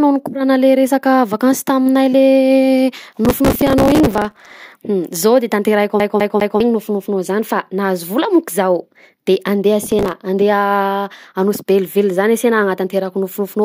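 This is a speech clip with two separate problems. The first is processor overload crackle, a gritty tearing from 3.25 to 4.51 s and again, more briefly, from 9.86 to 10.12 s. The processor can't finish its small audio buffers on time, which sounds like buffers of around 3 ms. Each missed one replays stale audio with hard edges, and many of those misses in a row blur into crackle that stops once the load drops. The second is a CD stuck on one turn, just after "de tanterahiko", from 6.00 to 6.60 s. The same 0.20 s chunk repeats three times with a tiny mute at each jump. That's the quick, even stutter you get when a scratch knocks the laser back one track on every revolution.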